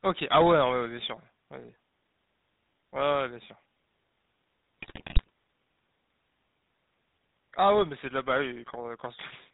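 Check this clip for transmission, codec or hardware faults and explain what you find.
Two faults are present: the whole clip carries GSM full-rate codec coding, and a burst of GSM bit errors runs from 4.78 to 5.30 s.

The GSM full-rate codec damage is plainly audible throughout the speech. The codec rebuilds the voice from a vocal-tract filter excited by regularly spaced pulses that keep only a third of the excitation samples. This gives a buzzy, gravelly roughness, which fits the 13 kbps full-rate mode. A spectrogram shows nothing above 4 kHz, and harmonics look smeared and grainy rather than cleanly striated.

The GSM bit errors are corrupted values reaching the decoder between 4.78 and 5.30 s. Flipped bits in the filter, pitch and gain parameters distort the spectrum or spike the level frame by frame. The speech breaks into squawks, pops and gargling, and the damage spreads across all 26 frames of that half-second. 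The waveform shows abrupt amplitude jumps at frame boundaries. The spectrogram shows blocky, misplaced formant energy and sudden bright vertical bands.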